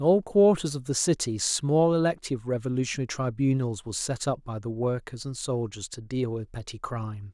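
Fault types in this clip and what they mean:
Nothing in the speech stood out as a technical fault on listening.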